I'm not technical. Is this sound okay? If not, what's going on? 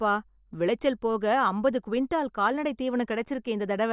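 Yes, no faults audible anywhere in this speech recording, so nothing needs fixing.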